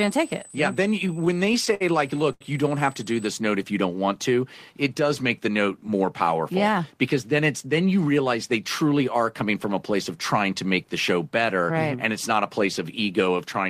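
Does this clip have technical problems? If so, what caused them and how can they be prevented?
Yes. USB whine runs from 0.0 to 3.27 s: a steady 8 kHz tone sits roughly 20 dB below the speech. That frequency matches the 125 microsecond microframe rate of a high-speed USB bus. The current drawn in bursts on each microframe is getting into the audio through a shared power or ground path, so the pitch stays fixed regardless of the speech. To prevent it, power the interface separately or fit a USB isolator or ground-loop break.

Repeated stalls (stutter) affect 1.07 to 1.82 s. The jitter buffer ran dry eight times, and the receiver covered each gap by extending the sound it had just played. Together these fills add up to 129 ms, about 17 percent of that stretch, and the longest single gap is 60 ms. No speech is actually lost, but the delivery drags and catches repeatedly. To prevent it, give the connection a steadier path or let the jitter buffer hold a deeper reserve.

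A short stall from a late packet follows at 2.32 to 2.43 s. One packet came in 82 ms later than expected, the buffer emptied, and the receiver held the last sound for 82 ms until the packet arrived. It then continued from exactly where it had stopped. Nothing is missing, but that moment is stretched unnaturally, with a slight buzz or dip. To prevent it, reduce network delay variation, for example by prioritising audio traffic or avoiding congested Wi-Fi.

Jitter buffer speed-up happens between 5.48 and 5.89 s. The buffer was overfull, likely after delayed packets arrived together, so the receiver trimmed it by cutting many tiny pitch-period slices, around 50 ms in total. The speech plays at about 110 percent speed with the pitch unchanged, so it sounds briefly hurried. To prevent it, keep packet arrival even so the buffer never fills past its target.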